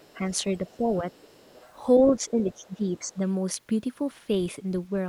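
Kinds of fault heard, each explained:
Other side's voice leaking through: at 0.00 to 0.17 s, 0.67 to 1.73 s and 2.94 to 3.14 s a faint second voice sits under the speech, roughly 30 to 35 dB down. This is likely loudspeaker playback of the far end that the echo canceller failed to remove from the microphone.
Speech suppressed in double talk: at 0.58 to 0.83 s and 2.09 to 3.23 s the talker's level dips, briefly by a few dB and then by around 10 dB over about a second. This is likely an echo canceller that couldn't separate near speech from far-end echo and turned both down.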